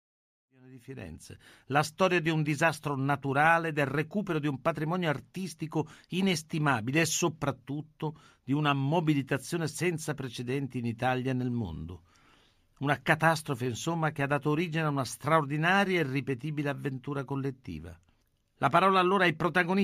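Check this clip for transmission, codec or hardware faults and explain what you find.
No faults found here.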